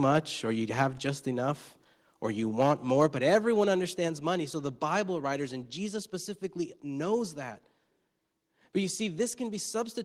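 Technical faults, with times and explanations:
2.6 to 2.71 s (just after "enough or you"), 3.01 to 3.05 s and 3.33 to 3.36 s, microphone overload: the loudest speech peaks crackle harshly, running about 2 to 3 dB past the converter's ceiling with a few percent of samples flattened, likely from input volume set too high. Unlike a gain step, the overall level stays put.
3.06 s and 4.08 s, microphone volume stepped down: speech and background both drop suddenly by about 3 dB at each point, with no added distortion. The first step comes right after the overload ending at 3.05 s, which is likely the call software cutting the microphone's input volume in a single step after detecting clipping.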